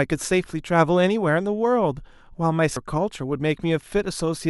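At 2.77 s the speech jumps forward with compressed frames skipped. A run of encoded frames never reached the output, either missing from the stream or rejected by the decoder as corrupt, so roughly 0.4 s of audio is absent, which fits about four frames of 92.9 ms each. Speech resumes further along than expected.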